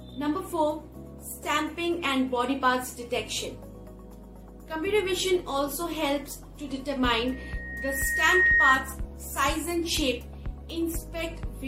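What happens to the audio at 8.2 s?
A loudspeaker feedback squeal runs from 7.26 to 8.95 s. A 1.9 kHz tone swells over about a second, ending roughly 10 dB above the audio, as the mic-speaker loop exceeds unity gain.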